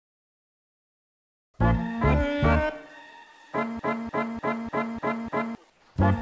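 From 3.79 s to 5.55 s, a broken-record loop takes over. A 0.3 s fragment plays six times, back to back. Each repeat is identical. The stream likely stalled and kept resending the last piece it held. The audio meant for that stretch is lost.

From 5.70 s to 5.96 s, comfort noise replaces the background for 0.26 s. The sender likely stopped sending audio during the pause. In its place is steady, featureless synthetic noise, about 5 dB quieter. This fits RFC 3389 comfort noise on the G.722 call path, which carries nothing above 8 kHz.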